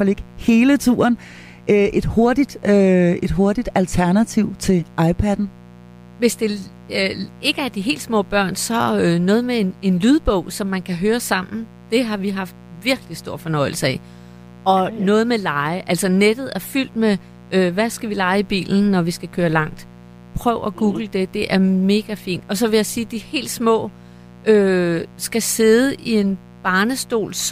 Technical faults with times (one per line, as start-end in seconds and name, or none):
0.00-27.52 mains buzz